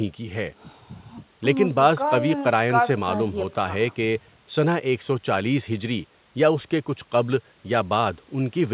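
Nothing in this speech stood out on listening, beyond the narrow band of its G.711 A-law call path, which carries nothing above 4 kHz.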